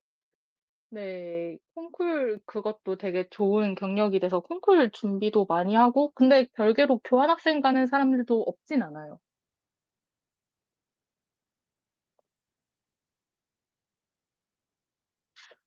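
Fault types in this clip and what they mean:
Microphone volume stepped up: input gain raised abruptly, so speech and background jump together, about 7 dB at 1.35 s, then about 4 dB at 2.37 s and 3.39 s.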